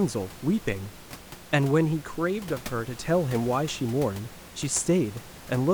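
Nothing goes wrong in this speech recording; the only extra sound is some ordinary room noise in the background, sitting about 18 dB below the speech.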